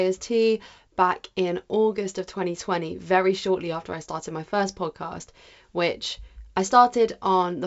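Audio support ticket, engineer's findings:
No faults found; G.722 wideband telephone path intact.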